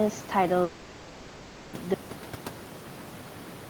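At 0.63 s the speech cuts off for about 1.1 s, likely a long network dropout, with a fading buzzy continuation filling the gap until it resumes at 1.75 s, that stretch lost. Then at 1.94 s there's an abrupt audio dropout to a faint residue, just a trace about 40 dB down through to the end, likely from the signal being lost upstream.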